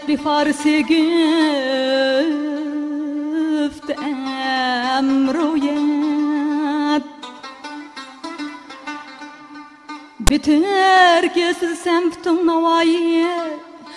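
At 10.27 s a block of file tags is played as audio, running to 10.30 s. Metadata bytes were handed to the decoder as if they were samples. The text portion, made of byte values clustered in a narrow range, comes out as a loud rasp offset to one side of zero. The zero padding after it reads as digital silence. The result is a brief, hard-edged burst of static that stops dead.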